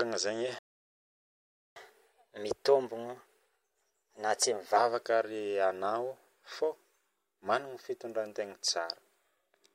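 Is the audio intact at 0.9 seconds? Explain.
No, 0.9 s falls inside a playback stall from 0.59 to 1.76 s: the speech cuts to silence for about 1.17 s, likely because the player ran dry of data.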